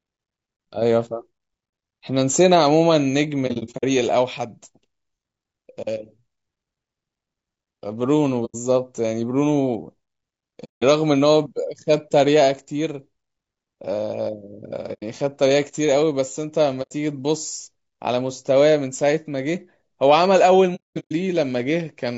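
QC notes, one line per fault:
Throughout: low-delay AAC compression. The speech sounds rough and grainy for the whole clip, and the damage is plainly audible. Noise fills the gaps between the voice's harmonics, and the top band sounds dull and synthetic. The likely cause is AAC-ELD, the low-delay codec of video calls, at a bitrate around 32 kbps. Its short frames resolve pitch harmonics poorly. At that rate there are too few bits to code them cleanly.
3.47–3.84 s, 8.45–8.55 s, 10.64–10.83 s, 14.93–15.03 s, 16.82–16.92 s, 20.75–21.12 s: AAC frame loss with muting. The sound drops out in soft-edged holes. The decoder zeroed the spectrum of each lost frame. Overlapping windows fade the sound out and back in. The short holes last about 90 ms. At 3.47 s, 210 ms is lost in scattered gaps. At 10.64 s, about 180 ms is lost. At 20.75 s, 330 ms is lost, with one stretch of about 200 ms.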